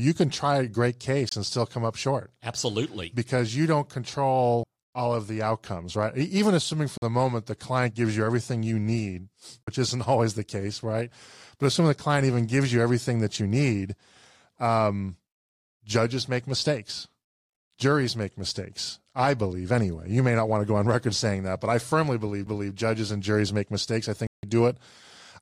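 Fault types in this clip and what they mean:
Bluetooth dropout: Short stretches of silence, most likely from audio packets arriving too late and being discarded. Here they last about 23 ms, 46 ms twice, and 162 ms near the end. Each shows as a flat gap in the waveform and a clean vertical blank band across all frequencies in the spectrogram.
CD skip: A very brief mute where the playback resumes from a different point, as if the pickup jumped tracks. It occurs just before "all of the outcomes" and between "that but I firmly" and "judges and juries make". On a spectrogram it appears as a hairline vertical gap with a discontinuity on either side.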